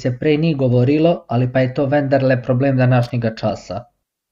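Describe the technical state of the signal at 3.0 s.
A short, irregular burst of crackle and scratching cuts through the speech from 3.03 to 3.10 s, right after "je to vendarle problem". This is loose connector crackle: a worn or dirty contact rapidly makes and breaks, chopping the signal into fragments.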